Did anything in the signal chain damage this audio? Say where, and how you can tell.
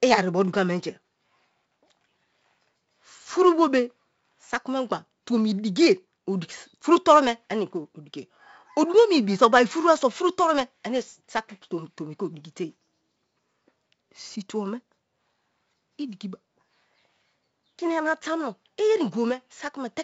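Yes, at the codec: 4-bit ADPCM compression throughout the speech, with gritty hiss that rises and falls with loudness rather than staying constant, smeared attacks, and nothing above 7.7 kHz, which fits a 64 kbps stream.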